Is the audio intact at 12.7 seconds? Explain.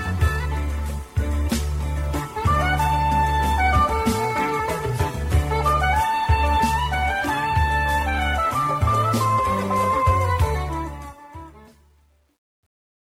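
No. At 12.7 seconds the tail of the fade-out sounds gritty. This is truncation distortion on a fade, running from 10.56 s to the end and worst after 11.39 s. The fade stage keeps too few bits, consistent with roughly 10-bit resolution, and adds no dither, so the fading waveform collapses into coarse steps.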